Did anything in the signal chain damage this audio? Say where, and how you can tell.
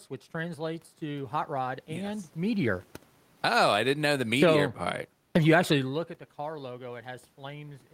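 Yes. Automatic gain falling in the call processing stage pulls the level down twice: by about 6 dB from 2.37 to 3.64 s, right after "hot rod and yes", and by about 5 dB from 4.25 to 4.6 s, after "I didn't know the". The control judged the input too loud, or its background noise too strong, and eased its gain down. Unlike a talker moving, as happens near 2.5 s, the room noise sinks along with the voice.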